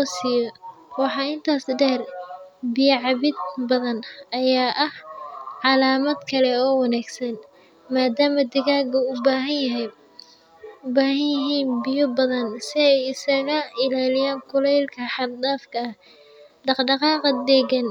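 No technical faults can be heard anywhere in the recording.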